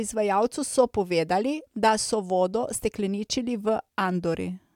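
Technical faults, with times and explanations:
Nothing stood out as a technical fault on listening to this speech recording.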